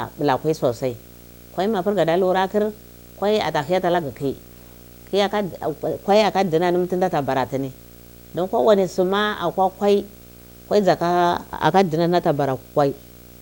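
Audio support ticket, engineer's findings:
Video or display buzz throughout the speech. Steady buzz at 59.94 Hz, the picture field rate, with hash above it. Thin whine at 15.7 kHz, the line rate. Level roughly 25 dB under the speech. Probable component: monitor or video cable near the audio path. Mechanism: the display's scanning currents couple into the audio wiring, carrying both field and line frequencies. Check cable routing, separation and grounding.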